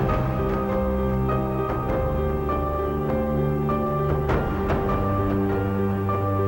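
A buzz at 59.94 Hz with hash above it, plus a 15.7 kHz whine, runs throughout, about 30 dB down: video or display buzz from a screen or video cable.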